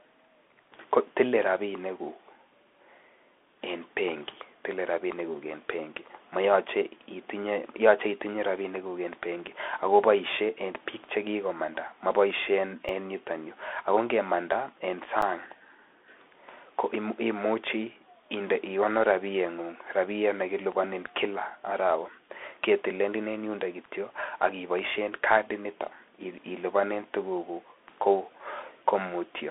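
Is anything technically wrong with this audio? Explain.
Yes. Two short dropouts interrupt the speech, at 12.89 s (about 2.9 ms) and 15.22 s (about 8.7 ms). In each, the sound freezes flat for an instant rather than falling to silence, then resumes as the waveform jumps back. This is an underrun with held sample: the output buffer emptied and the converter held its last value until data returned. The first gap fits a 128-sample buffer. Roughly 3 ms and 10 ms of live audio were lost.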